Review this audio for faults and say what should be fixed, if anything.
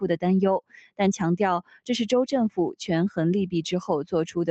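A noise suppressor applied to music or sounds is active through the whole clip. It was built for speech. Here it treats sustained material as noise. Steady parts and tails get pulled down while sharper onsets slip through. The result is a level that swings by roughly 10 dB. You hear pumping and a thinned, fluttering body. This is constant, not tied to one moment.

Two passages are sound cut by the noise suppressor. The first runs from 0.66 to 0.99 s, dropping by about 21 dB at its deepest. The second runs from 1.63 to 1.89 s, with a drop of about 19 dB. Each lasts a fraction of a second. The sustained content sinks far below its surroundings, and its decay is chopped short. The call path's top end simply stops around 8 kHz.

Disable speech-oriented noise suppression, or switch the call to a music mode, whenever non-speech audio is being sent.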